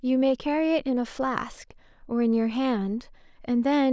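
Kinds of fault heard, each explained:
No technical faults heard.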